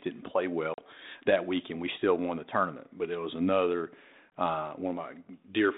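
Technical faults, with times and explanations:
0.74–0.81 s and 4.30 s, packet loss on an ADPCM call: abrupt silent holes of about 40 ms and 20 ms (roughly two packets, then one), after which the 32 kbit/s G.726 speech, band-limited to 200 Hz–3.7 kHz, returns slightly distorted. Unlike a plain dropout, the damage outlasts the gap because the receiver's adaptive predictor and step size have drifted from the sender's and need some tens of milliseconds to realign.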